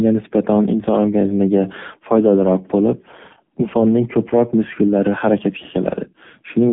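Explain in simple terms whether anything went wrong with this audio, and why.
Something did go wrong. From start to finish the speech went through the AMR narrowband mobile codec, the old 2G/3G phone codec. Everything above 3.5 kHz and below 150 Hz is cut away, so it sounds thin and boxed-in, and the low data rate makes it audibly buzzy and synthetic.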